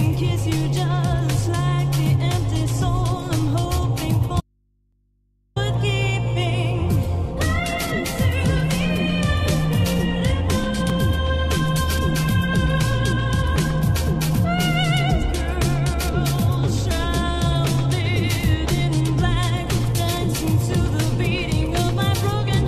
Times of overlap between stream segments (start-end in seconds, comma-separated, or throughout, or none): 4.92, 10.90, 16.91